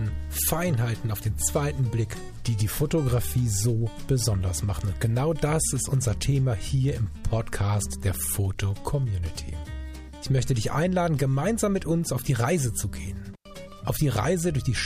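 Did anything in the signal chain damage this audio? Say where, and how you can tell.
Yes. An intermittent contact in the analogue wiring opens from 13.34 to 13.47 s, dropping the sound for about 99 ms with crackle at both edges and faint hiss in the gap. On the waveform it shows as a near-flat stretch between spiky edges, and on a spectrogram as a gap between broadband streaks.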